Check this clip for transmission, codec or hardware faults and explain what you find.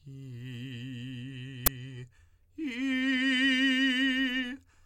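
One fault: an uninitialised buffer at 1.66 s in the music. For about 10.7 ms, stale memory plays as samples, a length that fits a 512-sample buffer, giving a short, loud burst of digital noise. The waveform shows an abrupt block, and the spectrogram a broadband vertical stripe.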